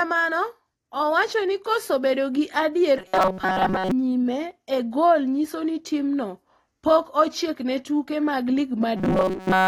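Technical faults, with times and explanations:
Throughout: AAC compression. The speech sounds dull and smeared, with the top end cut off. Sibilants carry a fizzy, warbling edge. This is likely low-bitrate AAC-LC coding, fitting about 32 kbps. The coder drops the top band and thins the spectrum to save bits.
2.98–3.91 s and 8.97–9.68 s: robotic sound from repeated short buffers. After "koso bedo gi adier", before "nyime e gol nyiso", and after "ochiek ne tuke mag", the speech becomes a rigid metallic buzz at 188 Hz. Likely late audio, with a 5.3 ms buffer replayed while most real sound is skipped.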